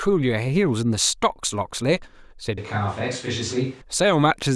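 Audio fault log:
2.58–3.81 s, switch to a distant microphone. The speech abruptly turns roomy and hollow, with thinner bass, then snaps back. Level stays about the same. Room noise sits about 25 dB below the speech. A farther microphone likely replaced the close one.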